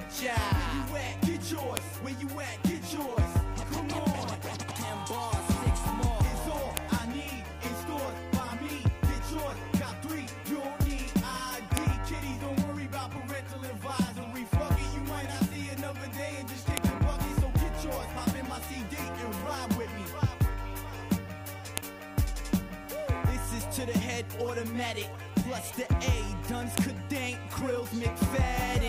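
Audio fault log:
1.77, 6.77, 11.77, 16.77, 21.78 and 26.78 s, file header played as audio: a sharp click every 5 s. Header bytes at each joined piece play back as samples.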